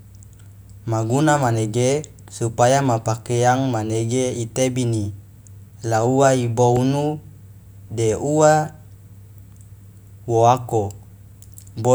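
A speech recording with a single loud pop from 6.77 to 6.79 s: a sharp thump jumping roughly 10 dB above the speech, which carries on underneath it uninterrupted. The cause is likely a sudden voltage spike, from a plug, switch, static discharge or driver glitch, entering the signal path.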